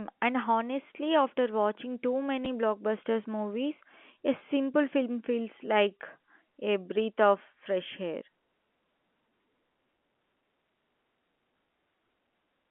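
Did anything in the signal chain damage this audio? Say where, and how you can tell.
Yes, at the network stage. There's packet loss with the last packet repeated: a small blip at 2.45 s, just before "blockbusters movies a", and again at 4.39 s, right before "film feels like a". Each gap is about 10 ms, which fits one lost 10 ms packet that the receiver filled by replaying the previous one, leaving a seam over the band-limited G.711 telephone sound.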